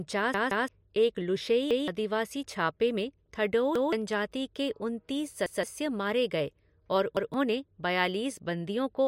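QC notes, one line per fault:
0.34–0.68 s, repeated buffer: a 0.17 s slice of speech plays three times with hard joins, a stutter from playback refilling the device with the last block when fresh audio came late, which fits an 8192-sample buffer; roughly 0.3 s of speech is skipped.
1.71, 3.76 (after "छापे में थडोऊ"), 5.46, 7.17 s (after "गए और"), repeated buffer: each time the same 0.17 s block sounds twice with an abrupt seam, costing roughly 0.15 s of speech at each of these four points.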